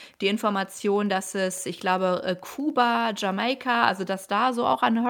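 A nearby Wi-Fi radio is coupling into the audio circuit, which rectifies its beacon transmissions every 102.4 ms. This Wi-Fi interference runs under the speech for the whole clip as a faint, steady ticking just under ten times a second, roughly 40 dB below the voice.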